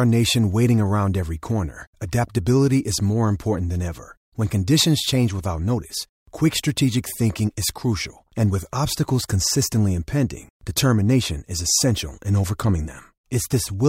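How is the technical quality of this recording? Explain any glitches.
No audible glitches or faults.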